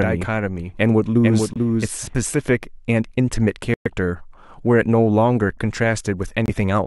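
From the very start until 2.22 s a doubled audio track runs under the speech: a second full-band copy trails the original by roughly 0.4 s and sits about 5 dB lower. It is most likely a second capture path or an edit holding two copies out of step. Unlike an echo or room reverb, the copy has no decay and no room colour, and it stops abruptly at 2.22 s.

Within that stretch, at 1.53 to 1.58 s, the first corrupt frame muted appears. Two more follow, at 3.74 to 3.88 s and 6.46 to 6.50 s. Each is a hard-edged hole of silence where the decoder threw away damaged compressed frames and the player filled the gap with nothing. The lengths fit a couple of frames, then about five, then about three. Unlike a dropout that skips ahead, the timing is kept: the sound resumes exactly where it would have been.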